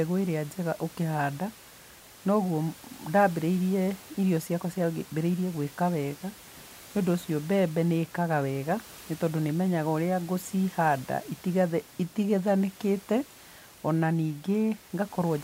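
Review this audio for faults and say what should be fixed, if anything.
Nothing here needs fixing; no faults can be heard.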